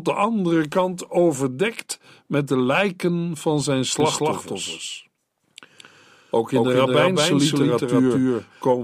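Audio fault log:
4.0 s to end: doubled audio track. A slower second capture path or an edit likely mixes in a copy about 200 ms late at roughly equal level, so the speech abruptly doubles into a dry, undecaying echo.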